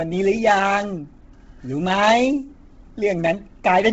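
A speech clip with heavy codec damage from start to finish. Nothing is left above 7.8 kHz, and the upper band that remains has a breathy, grainy texture: noise fills the places where real detail has been stripped out. That damage is likely Bluetooth LC3 compression at a low rate, and the sound fits about 16 kbps. A plain low-pass filter would cut the top cleanly. Here the grainy noise filling tells it apart.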